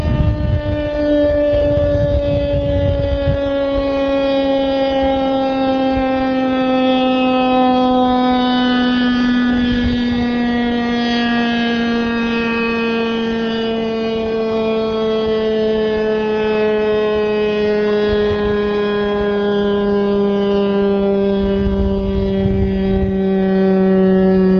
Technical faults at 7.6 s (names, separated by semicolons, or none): none